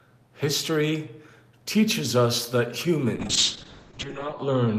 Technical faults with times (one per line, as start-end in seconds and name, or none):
3.17-4.79 call bitrate drop